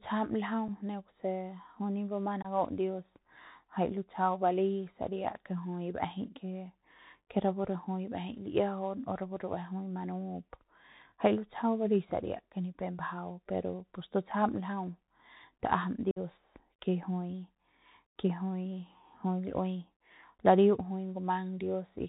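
Speech carried over a Bluetooth CVSD headset codec, which fits a 64 kbps link, cuts everything above 4 kHz, leaving scratchy s sounds, granular hiss and distortion on loud highs. Unconcealed Bluetooth headset packet loss drops about one, three and seven packets at 0.68 s, 2.42 to 2.47 s and 16.11 to 16.19 s, leaving abrupt holes of 7.5, 22.5 and 52.5 ms.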